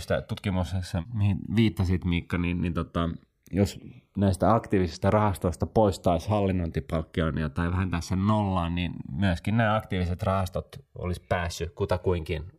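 Speech recorded with its channels drifting apart: separate device clocks, roughly 300 ppm off, let the inter-channel delay creep to about 2 ms, giving slow flanging in mono.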